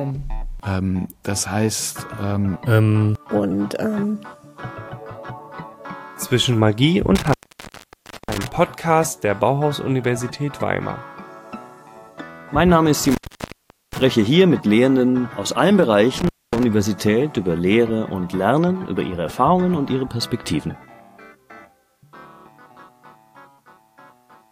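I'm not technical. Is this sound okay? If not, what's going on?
No. There's an intermittent contact at 7.15 to 8.47 s, 13.04 to 14.03 s and 16.18 to 16.63 s. A loose cable or plug is briefly losing its connection, so the sound drops out for about 0.95 s, 0.78 s and 0.24 s. Each gap starts and ends with a crackle as the contact scrapes open and shut, and a faint hiss is left in between.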